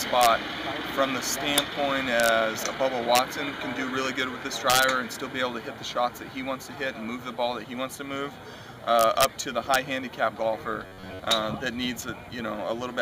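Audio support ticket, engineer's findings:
Integer overflow: sharp cracks at 0.21–0.27, 1.58, 2.20–2.29, 3.15–3.19, 4.70–4.84, 8.99–9.25, 9.74 and 11.32 s. Peaks about 1–4 dB over full scale wrap to opposite sign. Gain stage lacks saturation.

Robotic sound from repeated short buffers, 10.86–11.19 s: rigid 93.8 Hz metallic buzz. Likely buffer starvation, with roughly 10.7 ms blocks repeated over most of the span.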